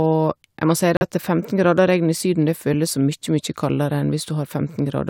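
Speech clip. Right after "må si", a corrupt frame is muted: audio cuts abruptly to silence from 0.97 to 1.02 s. The gap fits roughly two rejected codec frames.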